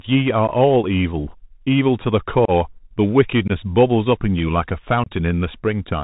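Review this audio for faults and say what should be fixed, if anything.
The speech has the Bluetooth CVSD headset codec sound throughout. Nothing above 4 kHz gets through. The coder sends one up-or-down bit per sample and adapts its step, which fits a 64 kbps CVSD link. Loud high sounds outrun the step, s sounds turn scratchy, and a granular hiss sits underneath. To prevent it, record through a wideband path such as a wired microphone or a headset using mSBC or LC3.

There are four short holes from unconcealed Bluetooth headset packet loss. They fall at 0.47 s, 2.45 to 2.51 s, 3.48 to 3.51 s and 5.04 to 5.11 s. About 15, 30, 19 and 26 ms of audio are lost. Each time, a handful of voice packets never arrived. Silence or an idle pattern filled the gap, and the edges are abrupt. To prevent it, keep the headset close to the phone, away from interference, and use a link with loss concealment.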